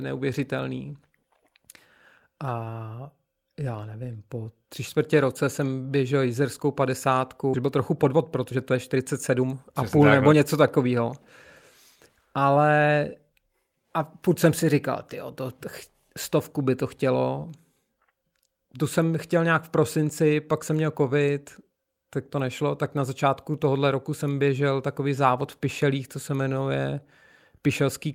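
At 7.53 s the speech skips ahead. About one and a half seconds were dropped, and the two sides join with no gap.

A jitter buffer speed-up follows from 7.57 to 11.13 s. The receiver trimmed pitch-period slices to shed excess delay, running 115% speed at unchanged pitch and sounding hurried. A milder 108% speed-up runs from 11.95 to 14.64 s, ending just before "říkal ty to".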